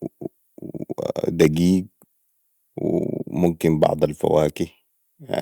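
At 1.83 s the speech and its background both drop by about 2 dB in a single step, and they stay lower. The cause is most likely the microphone volume being stepped down by the call software. Unlike a fade or compressor pumping, the change is instantaneous and does not recover.

From 3.83 to 3.87 s the loudest peaks are pushed about 3 dB past the converter's limit, and a few percent of samples are flattened at the ceiling. This harsh, crackling edge is likely microphone overload. Unlike packet-loss glitches, the sound itself never drops out; only its tops are cut off.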